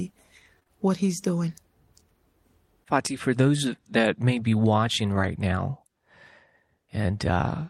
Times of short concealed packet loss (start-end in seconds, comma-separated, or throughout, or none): 0.59-0.71